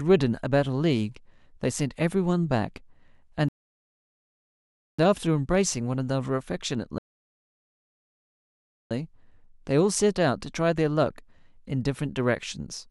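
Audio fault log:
3.49 to 4.99 s and 6.98 to 8.91 s, rebuffering stall. The speech drops to silence, then resumes exactly where it stopped. Playback ran dry, adding 1.5 s and 1.93 s.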